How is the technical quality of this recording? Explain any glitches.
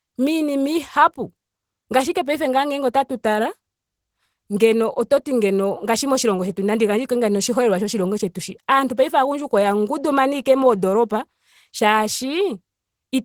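The technical quality is compromised by codec damage. It's plainly audible, all the way through. Opus compression, likely, at a low rate around 16 kbps: the encoder's hybrid speech mode squeezes things, so the speech sounds hoarse and grainy, even with content reaching about 20 kHz.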